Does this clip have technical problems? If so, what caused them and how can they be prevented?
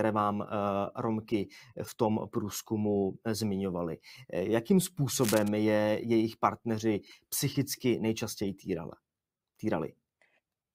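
Yes. Cable scratch noise runs from 5.16 to 5.49 s, a dense, uneven scratching burst roughly 10 dB below the speech. The likely cause is a worn cable or connector being moved, its contact resistance fluctuating rapidly and injecting noise. Prevent it by replacing worn leads, cleaning connectors, and securing cables against movement.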